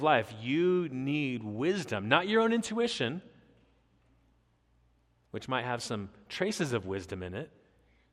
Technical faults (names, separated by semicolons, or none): none